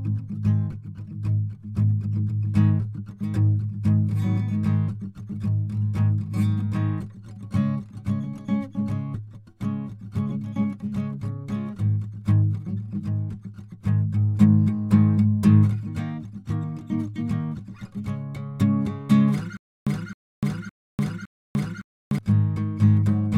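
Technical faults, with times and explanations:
19.57–22.18 s, stutter with silent gaps: playback likely stalled and re-fired its last 264 ms fragment four times, each burst followed by about 297 ms of dead digital silence, so the music jerks at a steady 562 ms pace while the audio meant for that stretch never arrives.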